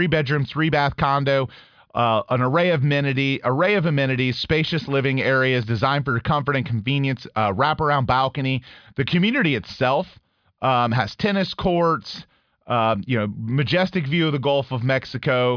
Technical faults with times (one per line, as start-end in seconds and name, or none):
none